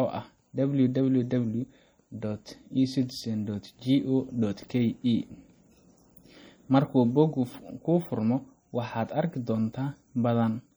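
Speech run through a bitrate-starved encoder, most likely MP3 compression at a rate that fits roughly 48 kbps, throughout the clip. With too few bits, the encoder drops the upper treble above a fixed cut-off and lets quiet frequency components blink in and out between frames. The result is plainly audible: a dull top end, a watery, swirling texture around the speech, metallic chirping on s sounds, and consonant attacks that smear instead of landing cleanly.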